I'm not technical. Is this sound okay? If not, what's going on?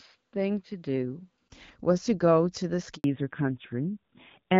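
No. At 2.96 s there is a handover gap: the phone switched the call from one network to another, and for about 80 milliseconds, until 3.04 s, nothing came through. The speech cuts out briefly and whatever was said in that moment is lost.

From 3.04 s to the end there is a fallback to narrowband. Before the switch the call used HD Voice, which carries a fairly full range of sound. After it, the call drops to an older phone codec that removes everything above 4 kHz, so the voice sounds duller, muffled and rougher.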